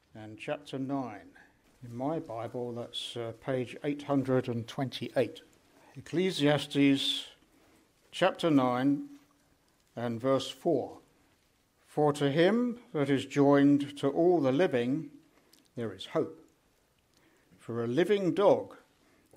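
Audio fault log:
No audible faults detected.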